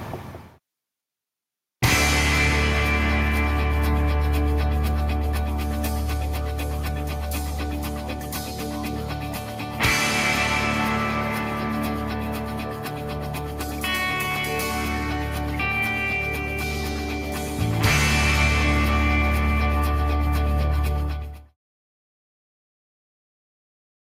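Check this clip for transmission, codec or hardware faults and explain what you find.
Nothing here points to a transmission, codec or hardware problem, and the only level change is a gentle fade-out that starts somewhere around 20.5 s and finishes at 21.57 s, just as an editor would shape an ending.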